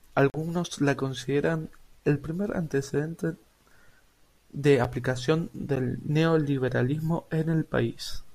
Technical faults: block of digital silence

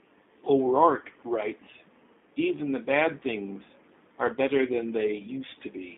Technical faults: G.729 codec

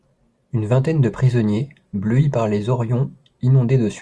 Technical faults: none

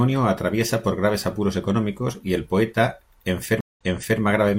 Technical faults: stream reconnect

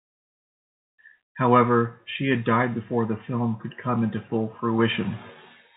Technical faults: none

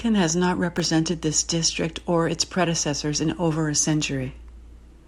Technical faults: processor overload crackle

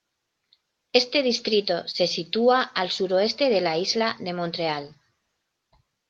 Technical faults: short stall from a late packet

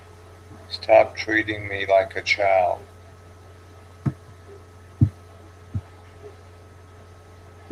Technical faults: none

